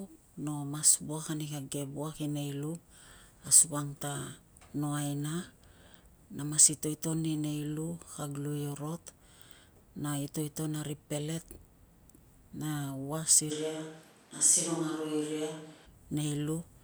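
Speech recording where, from 13.52 to 15.85 s, the sound abruptly turns roomy and hollow, loses bass, drops roughly 5 dB and gains room noise near 30 dB below the speech. It is likely a switch to a distant microphone, with the close mic's signal missing there.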